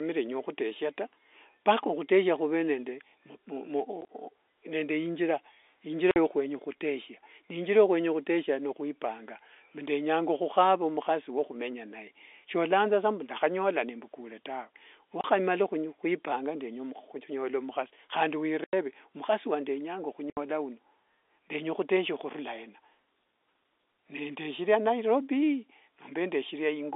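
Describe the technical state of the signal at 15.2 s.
At 15.21 to 15.24 s there's a 30 ms packet loss filled with silence, between "mbu ndakhanyola nembukule tawee" and "khwipanga ndenya khunyola mukhasi". The receiver dropped in dead air, which fits three 10 ms packets, and the gap has hard edges against the narrowband telephone sound.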